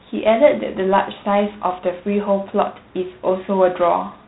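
A speech clip, degraded throughout by G.726 ADPCM coding. The whole recording sounds band-limited, with nothing above 4 kHz. That is the telephone band this codec carries. A harsh, rasping hiss rides on the speech. It rises and falls with the level of the sound. ADPCM sends only a coarse difference from a predicted sample. With few bits per sample, the quantization error becomes audible noise. The damage is plain, which fits a 24 kbit/s setting.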